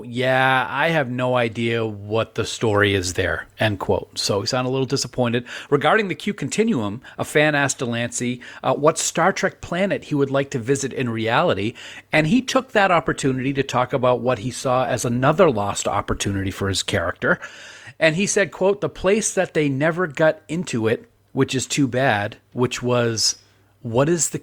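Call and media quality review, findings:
Adaptive stream at a lower bitrate, 11.71–17.71 s, starting right after "to visit in reality". Connection throughput dipped; player switched to a lower-rate rendition, consistent with Opus stepping down from 64 to 24 kbit/s. Sudden quality drop, no gap: codec artefacts rise, bandwidth still reaching 20.4 kHz. Full quality returns abruptly after 6 s.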